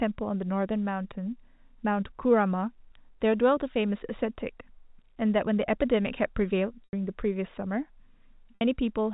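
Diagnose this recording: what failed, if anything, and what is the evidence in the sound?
The network dropped packets, and the receiver covered them with packet loss concealment by pitch repetition. This speech is carried as G.711 A-law telephone audio, band-limited to 4 kHz. At 6.84 s a gap of 90 ms appears. At 8.55 s a second gap lasts 60 ms. In each, the last pitch cycle is looped into a held, buzzy tone. That tone fades over about 50 ms. The speech then returns through a short cross-fade.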